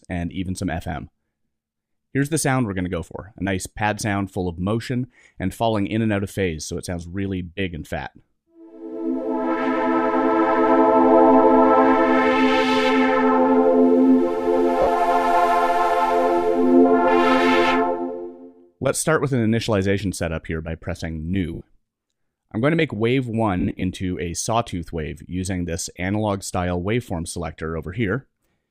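Around 14.82 s, 21.54 s and 23.6 s there are lost LE Audio frames: 50 ms, then 70 ms, then 140 ms scattered over 220 ms in runs of up to roughly 40 ms. The LC3 decoder patches each gap by replaying the last spectrum with scrambled signs, so the sound briefly smears into a noisy blur.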